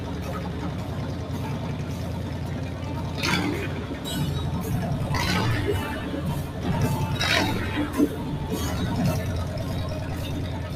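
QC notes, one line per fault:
Throughout: hard clipping. The signal is driven about 9 dB past full scale, so around a tenth of samples are cut flat, giving harsh fuzz on loud passages.
Throughout: noise suppressor applied to music or sounds. A speech-style suppressor treats sustained tones and tails as noise, pulling them down by about 5 dB, so the sound pumps and thins.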